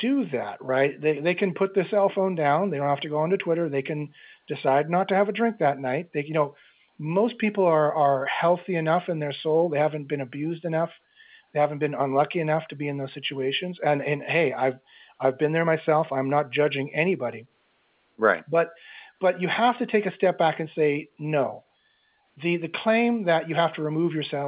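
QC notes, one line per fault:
No technical faults are present in the signal, and the speech carries the narrow band expected of an A-law telephone line.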